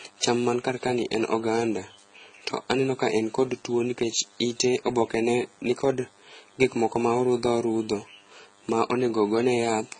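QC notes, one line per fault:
Throughout: DECT cordless phone buzz. A nearby DECT handset or base sends radio bursts every 10 ms, and the audio circuitry rectifies them. This leaves a thin, steady 100 Hz buzz with many harmonics, sitting roughly 35 dB below the speech.
Throughout: transcoding between lossy codecs. The speech was likely encoded at a low bitrate more than once, first with HE-AAC at around 16 kbit/s and then a further MP3 pass. Those artefacts stack, and nothing remains above 9.3 kHz.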